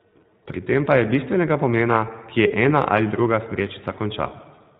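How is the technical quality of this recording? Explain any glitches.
The quality is limited by the codec, plus one brief dropout.

Throughout, the speech carries iLBC codec coloring: nothing above 4 kHz, and a slightly rough, synthetic edge from per-frame excitation coding, consistent with its 15.2 kbps, 20 ms mode.

From 2.48 to 2.51 s there's a lost iLBC frame: roughly 20 ms went missing, and the decoder repeated the last pitch cycle with noise, giving a short buzzy, held-vowel blip before recovering immediately.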